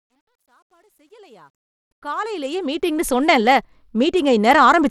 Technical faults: Bluetooth SBC compression; truncation distortion on a fade

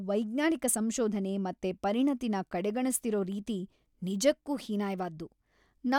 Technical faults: none

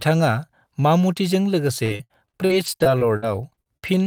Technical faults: repeated packet loss (robotic sound)

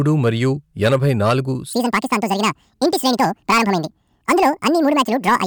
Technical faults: hard clipping; section at the wrong speed

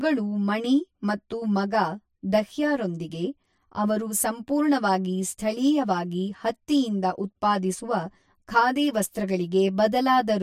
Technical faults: channel delay (comb filtering)

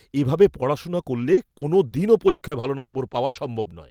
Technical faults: repeated packet loss (robotic sound)

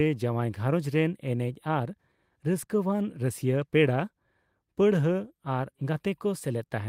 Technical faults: none

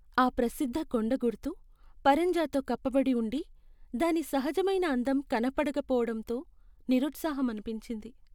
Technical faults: none

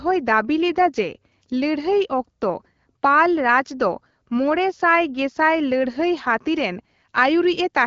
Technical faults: none

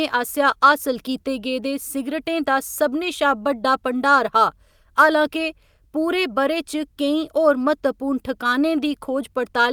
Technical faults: none

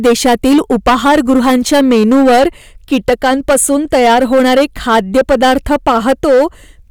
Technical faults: hard clipping

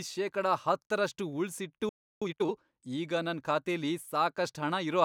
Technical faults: playback stall; time-compressed catch-up

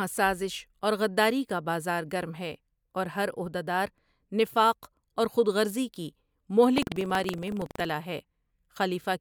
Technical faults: buffer tearing

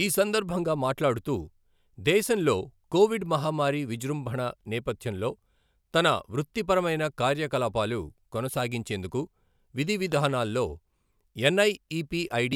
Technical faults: loud pop

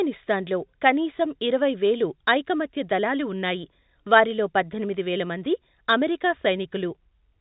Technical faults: none

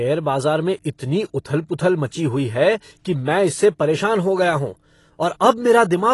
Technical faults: AAC compression

